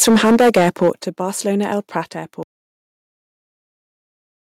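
Microphone overload runs from 0.01 to 0.9 s. The peaks of the speech reach about 10 dB above what the converter can represent, so their tops are flattened, and a sizeable share of samples, roughly a sixth, were pinned at the converter's limit. The likely cause is an input gain set far too high at the microphone or interface. It sounds harsh and crackly, with a gritty, buzzing edge on the loudest syllables through that first stretch.

Microphone volume stepped down occurs three times, at 0.03, 1.02 and 2.04 s, cutting the level by about 2 dB, about 8 dB and about 4 dB respectively. Each is an abrupt single-step drop in the microphone input volume, most likely applied by the call software's automatic gain control reacting to the overloaded input. Voice and background fall together at once, with the 1.02 s cut the most obvious sudden thinning of loudness.

Audio dropout to silence begins at 2.43 s and lasts to the end of the clip. 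The signal stops mid-flow and is replaced by silence, with no room tone or noise floor left, which points to the input being lost, likely through a disconnected device, a failed link or an unintended mute, while recording carried on writing silence. Whatever followed is simply gone.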